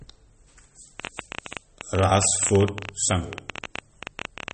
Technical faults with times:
0.00-4.54 MP3 compression
1.00-4.52 train of clicks

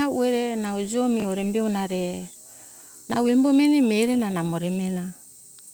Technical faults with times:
1.20-1.24 chunks out of order
3.10-3.16 chunks out of order

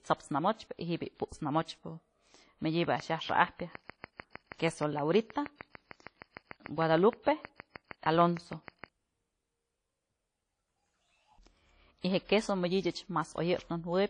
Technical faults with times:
0.00-14.10 WMA compression
2.84-8.85 train of clicks

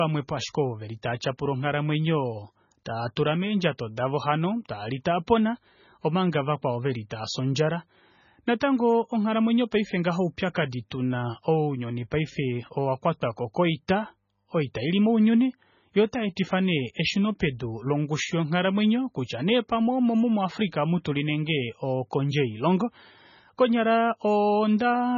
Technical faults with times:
0.00-25.18 MP3 compression
7.10 pre-echo
10.90 pre-echo
21.04 pre-echo

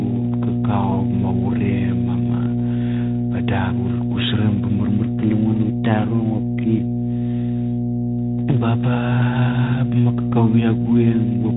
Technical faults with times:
0.00-11.57 mains hum

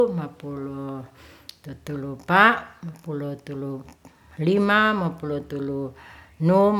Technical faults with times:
none

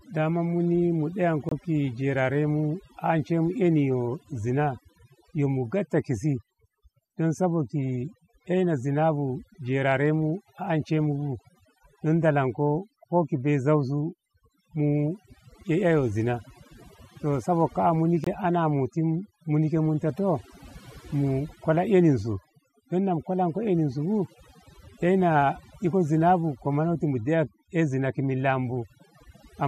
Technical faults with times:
0.00-29.67 overdone noise removal
1.49-1.52 digital broadcast dropout
18.24-18.27 digital broadcast dropout

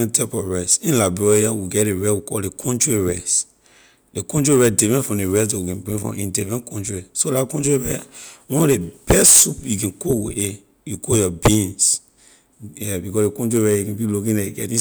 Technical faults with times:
none

